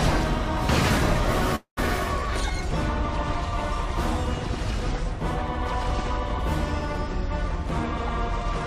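The audio has one call audio freeze from 1.55 to 1.79 s: the last sound is stretched into a fading buzz or hiss that decays to silence for about 110 ms, then playback resumes where it stopped. Nothing is lost, but everything after plays about 216 ms late, likely from delayed packets draining the jitter buffer.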